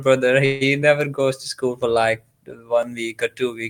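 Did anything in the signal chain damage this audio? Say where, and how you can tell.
Yes. At the network and jitter-buffer stage, a call audio freeze runs from 0.45 to 0.70 s, likely from packets held up in transit until the buffer emptied. The last sound is stretched into a fading buzz for about 154 ms, then resumes exactly where it stopped, pushing everything later.

At the buffer between two devices, clock drift buffer slips produce a regular click once every 1.0 s from 0.82 s onward. The two clocks likely disagree by around 700 ppm, so every second a few tens of samples are dropped or repeated, breaking the waveform.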